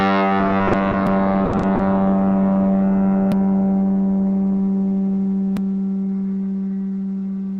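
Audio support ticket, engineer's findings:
Short concealed packet loss: brief smears at 0.67–0.71 s and 0.71–0.75 s (back to back), then 0.91–0.95 s. Roughly 20 ms missing per event. Component: network path / jitter buffer. Receiver extrapolated the preceding sound across each hole and cross-faded back, leaving a soft wobble rather than a dropout.

Repeated packet loss (robotic sound): choppy stretch 1.45–1.81 s. Four holes, 160 ms concealed in total, about 44% of the span, longest hole 80 ms. Component: network transport. Successive losses each patched by continuing prior sound before real audio fully recovers, so concealment stacks into a synthetic texture.

Audio missing between chunks: hard skips at 3.32 s and 5.57 s, roughly a third of a second gone each time, joined without silence. Skips at regular intervals, fitting 2.5 s chunks, point to chunked capture or processing. Likely cause: buffer handover between chunks dropping samples while one block closes and the next opens.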